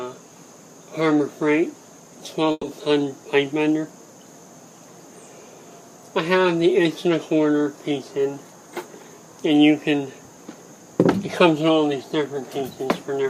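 There's a call audio freeze from 2.51 to 2.71 s: the last sound is stretched and fades for 120 ms, then 20 ms of silence, likely from delayed packets emptying the jitter buffer.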